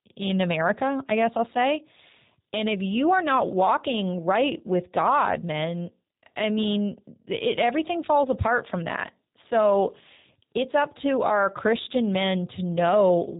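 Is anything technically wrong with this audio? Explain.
Yes. G.729 codec damage runs through the whole speech clip. The codec rebuilds speech from a model rather than storing the waveform. It uses a vocal tract filter, a pitch predictor and a few pulses per short frame. That sparse model fits an 8 kbit/s bitrate. Nothing above 3.8 kHz survives, so sibilants sound dull and the speech sounds boxed in. The damage is plainly audible. The speech stays intelligible but has a rough, synthetic edge.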